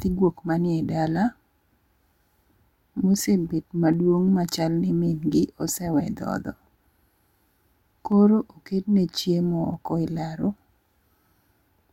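Three sharp clicks occur in the speech, at 3.94 s just before "machal ni", at 8.12 s just before "oketne chiemo oko elaro", and at 9.74 s between "oketne chiemo" and "oko elaro". Each is likely dropped samples: a fraction of a millisecond of the stream goes missing, so the waveform jumps abruptly to a later value. Nothing audible is lost. On a spectrogram each shows as a thin vertical line, and on the waveform as a single step.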